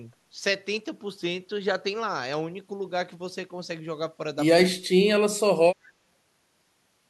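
From 4.77 to 5.03 s the speech drops by about 35 dB for about 150 ms in total, likely speech suppressed in double talk by the echo canceller.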